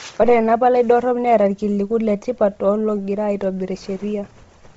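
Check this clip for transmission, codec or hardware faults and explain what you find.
One fault runs through the whole speech clip: what is most likely Bluetooth LC3 compression, heavy throughout. Nothing is left above 7.8 kHz, and the top of the remaining band is grainy and hissy rather than clean. A low-bitrate transform codec does this when it discards most of the upper spectrum and fills the gaps with shaped noise, which fits LC3 running at about 24 kbps with 7.5 ms frames. The speech comes out dull, with a breathy, rough edge.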